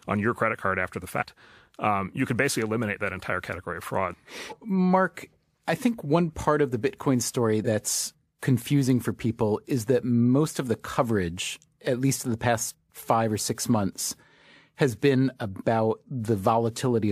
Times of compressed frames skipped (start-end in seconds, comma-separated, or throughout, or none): 1.19-1.23, 4.48-4.53, 7.64-7.68